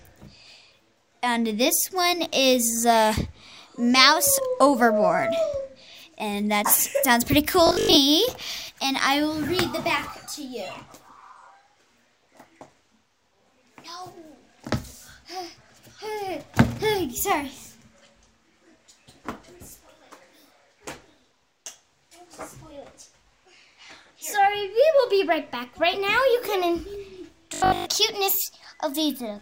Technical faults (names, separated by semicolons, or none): robotic sound from repeated short buffers